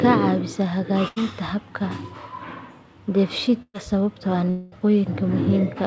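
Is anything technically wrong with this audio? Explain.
Yes, there are a few dropouts. Two bursts of packet loss, at 1.08 to 1.18 s and 3.62 to 3.76 s (just before "sababtoo ah"), cut out about 80 and 120 ms. The receiver stretched the last sound into a fading buzz or hiss, and the second one goes briefly silent before the speech resumes.

At 4.50 to 4.74 s, right after "sababtoo ah", about 220 ms drops out under a fading buzz or hiss, likely a long network dropout where the receiver kept concealing until audio arrived again. The call codec also cuts off everything above 8 kHz.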